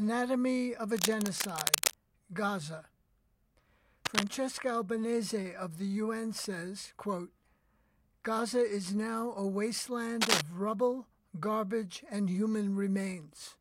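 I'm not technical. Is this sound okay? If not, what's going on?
No. Cable scratch noise, a scratchy rustle, covers the sound from 0.94 to 1.95 s, 4.05 to 4.28 s and 10.20 to 10.41 s. It is dense and uneven rather than separate clicks, and is likely from a worn cable or connector being moved.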